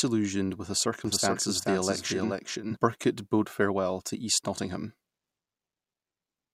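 From 1.05 to 2.77 s a doubled audio track appears: a second copy of the speech, around 0.4 s late and roughly 5 dB quieter, switches on and off abruptly. It is likely a second capture path or misaligned edit. The spectrogram shows a time-shifted duplicate pattern.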